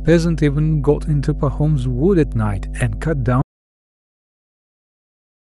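Mains hum runs through the whole clip. A steady 50 Hz tone sits fairly loud, roughly 10 dB under the speech, from power-line leakage into the signal. At 3.42 s an audio dropout to silence begins. The input was likely lost, leaving silence with no room tone until the end.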